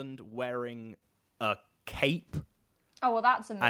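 From 0.83 to 0.85 s, just before "a cape", there is a lost packet rebuilt from error correction. The 20 ms stretch, which fits one dropped packet, was filled from a low-bitrate backup copy. It sounds briefly rough and grainy, and a spectrogram shows a thin, smeared strip.

At 1.02 s, also just before "a cape", the microphone volume steps up by about 8 dB in a single jump. Speech and background noise rise together and stay louder. On a waveform the envelope widens abruptly at that instant.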